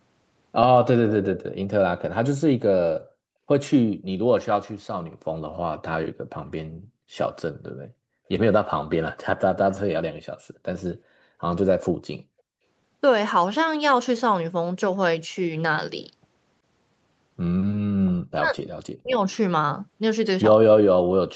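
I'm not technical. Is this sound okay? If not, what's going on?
No, there are a few short problems, all from the echo control that call systems use.

At 10.44 to 10.64 s and again at 11.05 to 11.23 s, the room sound behind the speech almost vanishes, then comes back. This is background gated by the echo canceller. While the far side's audio was playing from a loudspeaker, the canceller treated the microphone as a source of echo. It turned the microphone right down, each time for a split second.

Around 18.41 to 18.57 s the speech dips noticeably. At 19.01 to 19.18 s it nearly cuts out. This is likely speech suppressed in double talk. Both sides seem to be talking at once here. The echo canceller cannot tell the local talker apart from the loudspeaker's echo, so it squashes both for a brief moment.

At 19.32 s there is a very faint, brief scrap of repeated speech. It arrives about 0.38 s after the original. 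This is an echo leak, likely from a loudspeaker whose sound the microphone picked up. The echo canceller missed a small piece of it, and that piece was sent back down the call.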